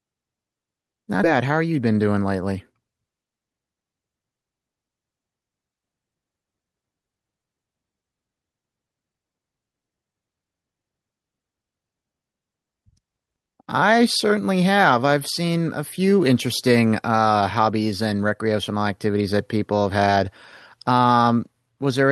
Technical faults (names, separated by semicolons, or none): skip ahead; jitter buffer speed-up